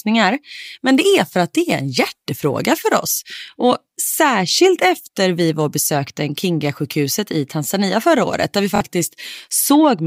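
At 1.71 s, between "är för att det" and "en hjärtefråga för", there is a bit error spike. A flipped bit throws two adjacent samples far off their true value, then they snap back. It is heard as one sharp, broadband tick, unrelated to the speech.

From 8.76 to 8.81 s, just after "förra året där vi", a Bluetooth stutter occurs. About 46 ms of audio failed to arrive, which fits two lost packets. The receiver replayed its last slice instead, giving a brief buzzy stutter. Speech then resumes further on.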